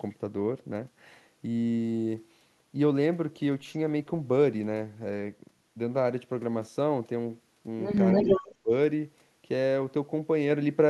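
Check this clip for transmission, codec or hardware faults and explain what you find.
Two faults turn up close together near the end of the speech, both pointing to trouble with echo cancellation on a loudspeaker-using end of the call.

From 8.12 to 8.42 s there is an echo leak: a delayed copy of the speech, lagging by 289 ms and roughly as loud as the original, overlaps it. The likely cause is an echo canceller failing to remove the loudspeaker sound its microphone picked up and sending it back.

From 8.24 to 8.71 s the speech is suppressed in double talk: it dips sharply, by around 30 dB at its deepest, over a total of roughly 0.4 s. With both sides sounding at once, the echo canceller likely mistook the talker for echo and turned everything down.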